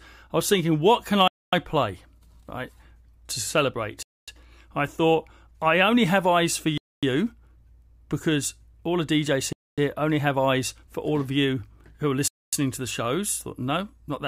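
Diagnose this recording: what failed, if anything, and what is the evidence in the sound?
Gap between chunks, at the chunking stage (storage or playback). The speech stops for 250 ms at 1.28, 4.03, 6.78, 9.53 and 12.28 s, once after every 2.5 s of audio, first after "was thinking what can". No speech is lost; silence is inserted at each join.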